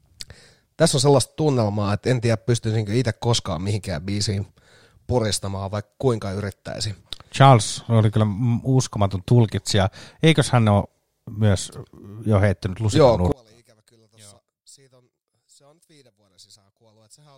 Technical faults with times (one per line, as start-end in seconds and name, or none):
13.32-17.38 one channel inverted